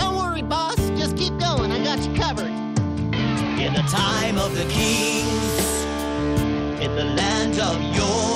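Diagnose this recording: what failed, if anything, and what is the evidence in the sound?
Codec stage: Bluetooth SBC bit pool drop, 0.96–3.89 s and from 6.43 s. Starved top sub-bands dull the treble; coarse quantisation adds grit.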